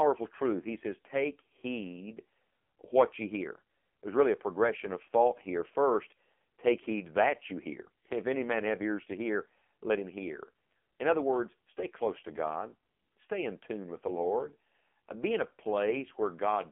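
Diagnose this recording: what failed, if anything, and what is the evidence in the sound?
The failure is at the codec stage: the speech went through the AMR narrowband mobile codec at a low mode. The heavy buzzy, synthetic texture fits a rate near 5.9 kbps. The whole clip sits in a 200 Hz to 3.4 kHz line band, with nothing above 3.4 kHz.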